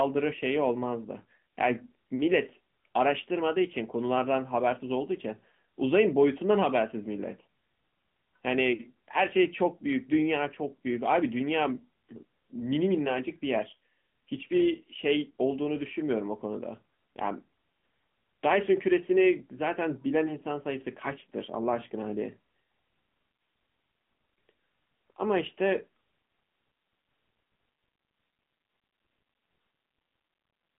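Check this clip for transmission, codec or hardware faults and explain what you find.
The speech runs through an AMR narrowband mobile codec from start to finish. Its encoder models the vocal tract and drives it with a few pulses per short subframe, keeping only a telephone band of roughly 150 Hz to 3.4 kHz, so the voice sounds thin, boxed-in and plainly synthetic, with a buzzy edge that fits a mid-rate mode around 10.2 kbps. A spectrogram shows a hard ceiling near 3.6 kHz with empty space above it and little energy below 150 Hz.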